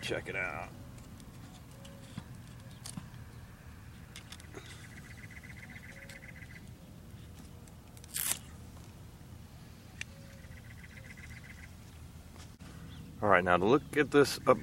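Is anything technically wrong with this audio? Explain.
Yes. From 5.16 to 6.88 s, crude rate conversion by repeating samples, likely 44.1 kHz to 48 kHz, adds gritty inharmonic fizz roughly 20 dB down, seen as stray spectral lines and stair-stepped waveform.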